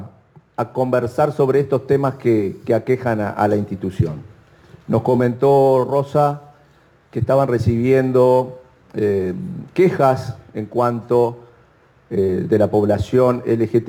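From start to finish the audio carries crude rate conversion: samples were repeated rather than filtered, consistent with 44.1 kHz stretched to 48 kHz, leaving a gritty, inharmonic fizz roughly 35 dB down that tracks loud, bright passages. A spectrogram shows faint mirrored partials; the waveform shows tiny stair-steps.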